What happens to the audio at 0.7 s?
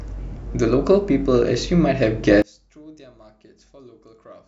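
Nothing goes wrong at 0.7 s; the speech carries on cleanly through that moment with no dropout, click or distortion.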